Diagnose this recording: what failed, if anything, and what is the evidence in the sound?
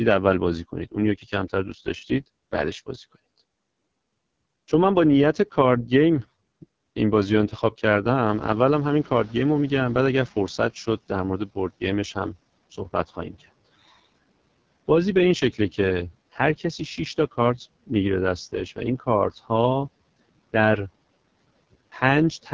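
Raspy, rough speech throughout: AMR wideband (HD Voice) codec damage, consistent with its low 6.6 kbit/s mode.

From 8.25 s to 10.74 s, background noise swells, then sinks by about 14 dB: the noise suppressor catching up after the room noise jumped.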